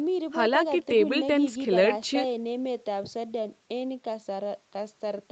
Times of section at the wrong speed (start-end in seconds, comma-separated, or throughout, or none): none